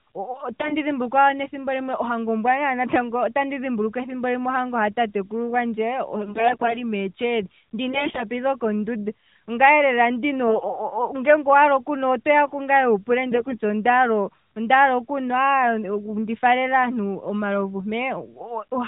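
A speech recording carried over a narrowband mobile link, with nothing above 4 kHz, and light AMR-NB coding that fits the 12.2 kbps mode. It has five bursts of AMR bit errors: 0.52 to 0.75 s, 6.26 to 6.80 s, 7.90 to 8.25 s, 10.48 to 10.79 s and 13.32 to 13.58 s. Pitch and level hold, but each burst turns hoarse and gargly. The sound points to roughly a tenth of the weakly protected bits flipping, somewhat more in the second burst. Misplaced excitation pulses and skewed gain and spectral values cause the scratchiness.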